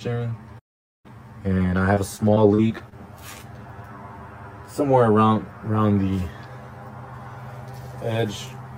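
From the very start the sound has a hollow, phasey colour, with the body thinned as though heard down a tube. This is channel delay (comb filtering): one channel trails the other by roughly 10 ms, and when the two are summed to mono, the shared content cancels at evenly spaced frequencies. The first notch sits somewhere around 50 Hz, and further notches repeat about every 100 Hz up the spectrum, giving the fixed, combed tone.

At 0.59 s the audio simply stops in mid-flow and stays silent until 1.06 s, a gap of about 450 ms, before carrying on. That abrupt hole, with nothing filling it, is a playback stall. The likely cause is the player running short of data or its audio thread being held up, so the output had nothing to play until it caught up.

From 1.94 s to 2.93 s the sound turns choppy, with small pieces missing. This is repeated packet loss: over that second, audio went missing again and again, in holes of up to 38 ms, about 160 ms altogether. 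Around 150 ms of that was patched by stretching the preceding sound, which covers roughly 15% of the stretch.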